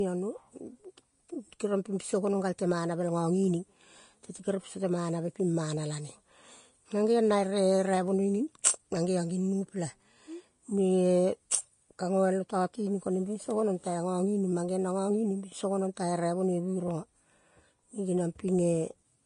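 From start to finish the speech carries plainly audible Vorbis compression damage, likely from a low-bitrate Vorbis encode, with a texture that fits something around 32 kbps. Nothing survives above about 10.5 kHz, and the treble just below that cut-off turns to grainy hiss, because fine detail there is replaced by noise of similar energy. Unlike a plain low-pass filter, the top end is roughened rather than just dulled, and consonant attacks sound blurred.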